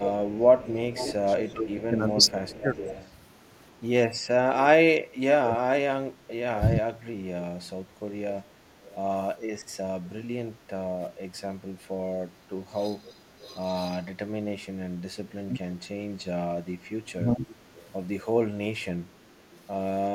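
Speech suppressed in double talk affects this speech recording from 0.0 to 2.88 s, 5.47 to 7.01 s and 12.38 to 17.48 s, where the voice dips by up to about 20 to 25 dB, most likely because an echo canceller, unable to tell the talker from loudspeaker echo while both sides spoke, attenuated everything. Echo leak appears at 0.03 to 3.13 s, 8.86 to 10.09 s, 13.05 to 13.55 s, 15.83 to 17.89 s and 19.53 to 19.64 s as a copy of the voice trailing by 380 ms. It sits about 10 dB below the speech at first and about 25 to 30 dB below later, likely residue the far end's canceller failed to remove from its microphone pickup and sent back.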